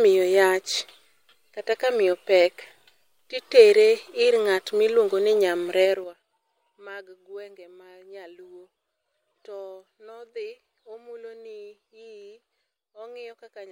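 From 5.85 to 6.22 s the speech is pulled down by roughly 25 dB in coarse 6 dB jumps, about ten per second, with no smoothing: zipper noise. Each jump clicks, giving an audible ticking; the waveform shows a staircase envelope, the spectrogram thin vertical lines at each step.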